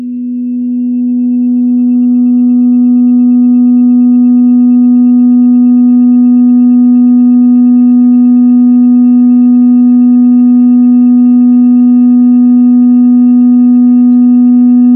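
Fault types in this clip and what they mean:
There are no fault types in this clip, so there is nothing for them to mean.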